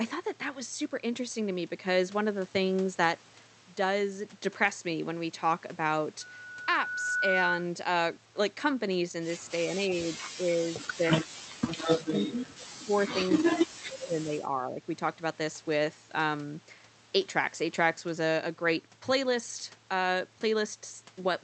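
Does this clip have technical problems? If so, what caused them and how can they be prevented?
Yes. From 6.21 to 7.70 s there is a loudspeaker feedback squeal. A steady tone near 1.5 kHz swells up over about a second. It ends up roughly 5 dB louder than the speech. The microphone is hearing the loudspeaker it drives. At 1.5 kHz the loop gains more than it loses, so the tone keeps feeding itself. To prevent it, lower the playback level, move the microphone away from the speaker, or use headphones.

The speech is suppressed in double talk three times. This happens from 9.64 to 11.36 s, from 12.05 to 13.18 s, and from 13.35 to 14.81 s. The speech dips. The deepest drops are about 20, 25 and 30 dB. The likely cause is an echo canceller facing both sides talking at once. It cannot tell the local talker from the loudspeaker echo, so it turns both down. To prevent it, use headphones or a canceller tuned to allow full double talk.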